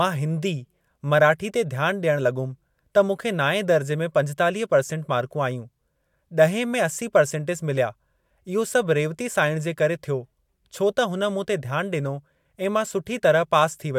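No technical faults can be heard anywhere in the recording.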